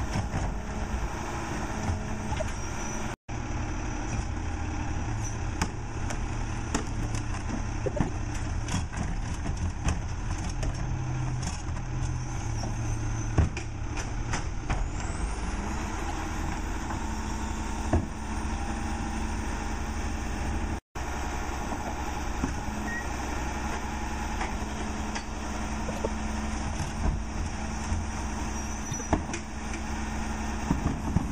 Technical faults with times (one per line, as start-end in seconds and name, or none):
2.32-2.50 frames out of order
7.86-8.09 frames out of order
15.88-16.11 frames out of order
25.88-26.06 frames out of order
28.83-29.01 frames out of order